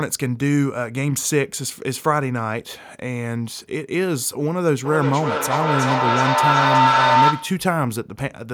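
From 4.85 s to 7.74 s a feedback howl builds to a tone around 1 kHz, peaking about 5 dB above the speech, with repeats roughly every 0.4 s. Unlike ordinary echo, each repeat grows rather than fades, because the microphone-to-loudspeaker loop gains level every trip.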